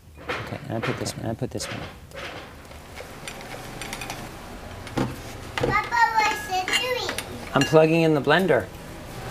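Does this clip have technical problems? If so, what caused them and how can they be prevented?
Yes. A doubled audio track runs from 0.70 s to 4.28 s: a second full-band copy of the sound trails the original by about half a second, at roughly the same loudness, with no decay or room colour, and it begins and ends abruptly. The likely cause is the same signal arriving twice, either captured again through a slower path or held as two offset copies in an edit. Monitoring only one capture route and checking timelines for duplicate regions prevents this.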